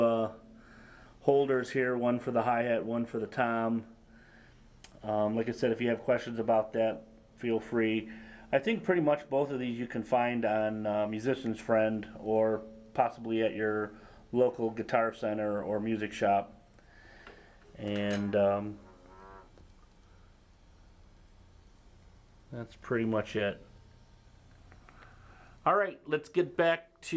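No technical faults can be heard anywhere in the clip.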